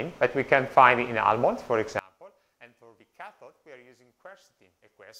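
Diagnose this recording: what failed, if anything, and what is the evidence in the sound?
One channel inverted from 1.99 s to the end: the level falls by about 28 dB and what remains is a faint residue, as centred content cancels in the mono sum. A polarity swap in the analogue wiring is the likely cause, leaving only the inter-channel difference.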